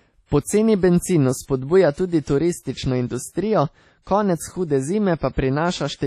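Speech runs through the whole clip with heavy codec damage: a ringing, washy quality in which the hiss swells and fades with the level of the voice. Nothing is present above 14.6 kHz. This points to likely WMA compression at a low bitrate, around 32 kbps. The transform encoder spreads its quantisation noise over long blocks of tens of milliseconds, so the noise smears around each sound. It also discards weak spectral lines, which thins out the upper band.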